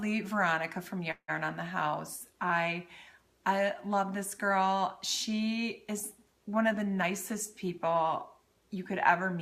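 At 1.11 s the sound stalls until 1.30 s in what sounds like a call audio freeze, likely from packets held up in transit that left the jitter buffer empty. The last sound is stretched into a fading buzz or hiss for about 170 ms, with roughly 70 ms of silence. The audio then resumes where it stopped, about 170 ms later than before and with nothing lost.

From 7.02 s to 9.34 s a jitter buffer speed-up is audible. The receiver trims short pitch-period pieces repeatedly to shed about 150 ms of backlog, so the audio runs at about 107% speed with unchanged pitch and sounds hurried.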